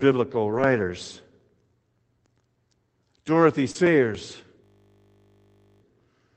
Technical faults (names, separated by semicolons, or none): lost packet rebuilt from error correction; short concealed packet loss; system hang loop